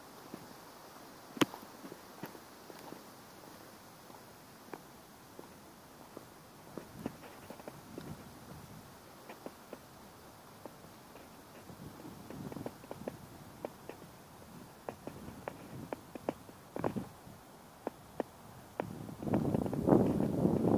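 Nothing here trips any alarms; I listened for technical faults and didn't hear a single one at any point in the audio.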